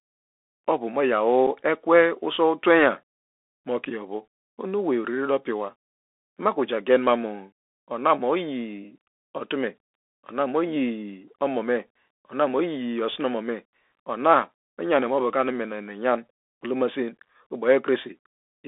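From the start, the speech sounds thin and boxed in, with nothing above about 3.6 kHz and little below 250 Hz. A fine granular hiss runs under it, s sounds come out scratchy, and loud bright moments turn harsh. This is the Bluetooth CVSD headset codec, which fits a 64 kbps link. It sends one bit per sample to say whether the waveform rises or falls, with an adapting step size. Fast, loud, high-frequency movement outruns that step and distorts, and the coarse stepping leaves the hiss.

At 1.47 s there is a brief, hard-edged hole of about 7.5 ms. The speech then resumes with "ekwe usow twenyan", quieter for an instant. This is unconcealed Bluetooth headset packet loss. About a single voice packet between headset and phone went missing, and nothing was done to hide the gap, so silence or an idle pattern filled it. The CVSD decoder's step size then had to rebuild, which is why the level dips as the sound comes back.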